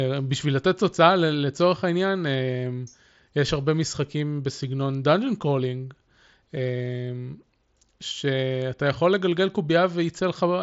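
Nothing stood out on listening to this speech recording.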